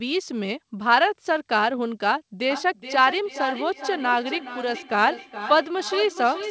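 Feedback echo between two devices runs from 2.5 s to the end of the speech clip at 6.5 s. Each word returns roughly every 400 ms, thinner and ringing, peaking about 10 dB below the talker, because a second device in the room replays the call and its microphone feeds it back. The G.722 call path has nothing above 8 kHz.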